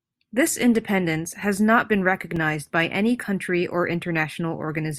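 A block of digital silence at 2.36 s, just after "independence has not been" and before "by any country or", drops the speech out for about 1.5 ms, which fits a 64-sample block the program failed to fill in time. With no fade at either edge, the brief gap is heard as a tick or dip.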